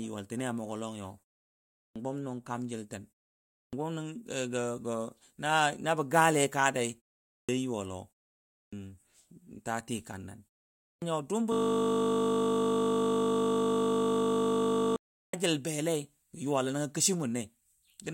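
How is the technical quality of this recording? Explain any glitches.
The recording has two kinds of glitch: repeated clipped starts after pauses, and one long system hang loop.

Clipped start after a pause, at 1.71, 3.5, 7.23, 8.49, 10.78 and 15.11 s: the output device dozes off in each short silence and needs about a quarter second to wake again. The first 220 to 260 ms of sound is lost, so the speech bursts in abruptly. This cuts into "bəm nʊng kaam jiltən" at 1.71 s, hits the phrase right after it at 3.5 s, and clips "jil belei yuwalo nəngo" at 15.11 s.

System hang loop, from 11.52 to 14.96 s: the system froze while the audio hardware kept replaying one 20 ms stretch of its buffer. That tiny fragment repeats back to back for almost three and a half seconds, producing a steady 50 Hz buzz in place of speech.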